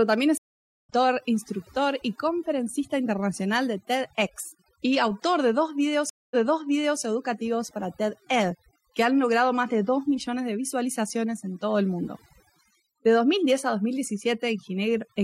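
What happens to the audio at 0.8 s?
At 0.8 s the speech has dropped out entirely: a gap of about 0.47 s runs from 0.38 to 0.89 s, and when sound returns at "instructor y conferencista internacional" it picks up roughly 0.3 s further on, skipping material. This is a stream reconnect. The connection broke, playback went silent, and a new decoder started mid-stream at a later point.

Through the same moment, the background is pulled down and breaks up into twinkling specks. That comes from overdone noise removal, which is present throughout the clip. The reduction was set so strong that it pulls individual frequency bands down or off whenever they come close to its noise estimate, and the quieter parts of the voice are removed along with the noise.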